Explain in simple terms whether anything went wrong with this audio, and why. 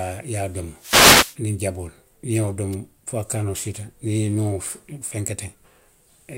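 Two wireless microphone noise hits occur, from 0.76 to 1.39 s and briefly at 2.72 to 2.75 s. The radio signal faded, so static swished over the speech.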